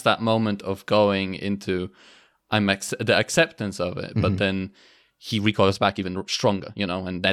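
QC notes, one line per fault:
5.29–7.33 s, time-stretched section: from just after "but then" to the end of the clip, the speech runs at about 1.46 times its earlier pace while the pitch stays unchanged. The abrupt jump in tempo with no rise in pitch sounds rushed, because short segments of the waveform have been cut out. This is likely a time-compression step that shortened the ending to fit a target duration.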